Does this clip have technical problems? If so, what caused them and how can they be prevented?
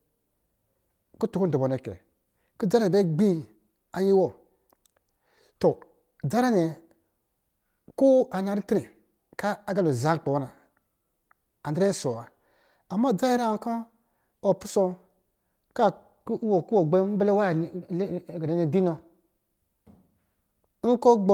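No, this clip has no technical problems, so there is nothing to trace to a cause or prevent.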